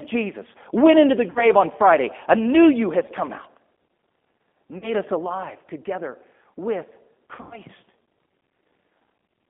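G.729 coding runs throughout this speech: an 8 kbit/s model of vocal tract, pitch and sparse pulses leaves a 200 Hz to 3.5 kHz band with plainly audible roughness. VoIP packet loss concealed by the speech codec follows at 1.30 to 1.51 s after "went into the", about 60 ms missing; at 4.78 to 4.93 s before "us alive together with", about 40 ms; and at 7.35 to 7.59 s after "us alive together with", 140 ms scattered over 160 ms with one 100 ms run. The decoder extrapolates its last pitch and filter into a fading buzz or coloured noise, and recovery lags.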